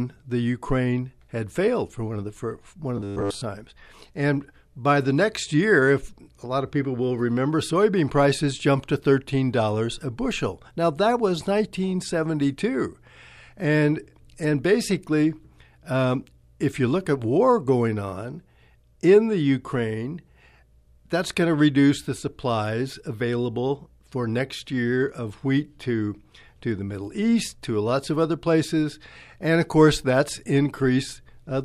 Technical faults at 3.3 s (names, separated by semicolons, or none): robotic sound from repeated short buffers